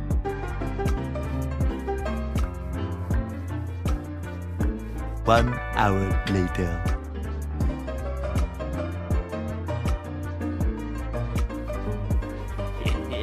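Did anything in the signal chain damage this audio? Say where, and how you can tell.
No, no stage damaged it.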